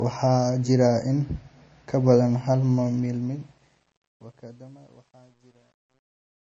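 From the start, nothing sits above 8.3 kHz and the smeared, swirly artefacts persist, likely low-bitrate audio saved at a high bitrate. The sound points to a 32 kbit/s MP3 re-encoded at 192 kbit/s, not a simple low-pass filter. From 2.87 s, as the fade-out descends, truncation distortion on a fade sets in. The level stage seems to keep only about 10 bits without dither, so the tail turns gritty, worst between 4.0 and 6.58 s. Unlike codec artefacts, this worsens steadily as the level falls.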